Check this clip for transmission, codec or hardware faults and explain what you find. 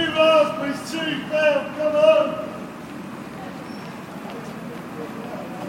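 No faults can be heard in this recording of sounds. There is nothing to report.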